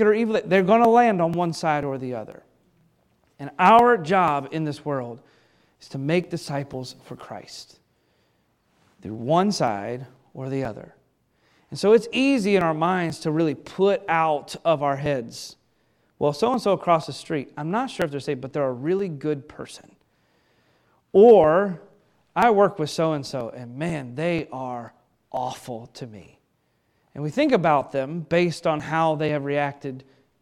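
Periodic USB or driver dropouts run from 0.36 s to 30.27 s through this speech recording, arriving every 0.49 s for roughly seventy events in all. Each time, something stalls the USB link or the audio driver and around 10 ms of audio is skipped outright rather than filled with silence, so the waveform jumps and leaves a small regular tick or pop that is audible only where the speech carries signal.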